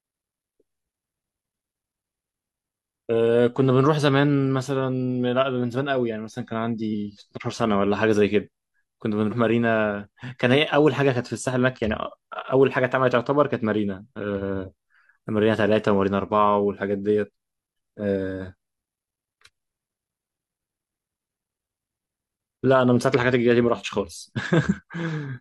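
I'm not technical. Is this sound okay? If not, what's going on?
No. There are compressed frames skipped. Small chunks of the speech go missing at 6.89–6.94 s, 9.28–9.33 s, 14.83 s and 17.73 s. Each time, roughly a tenth of a second vanishes, a bit more at 17.73 s. The sound jumps ahead.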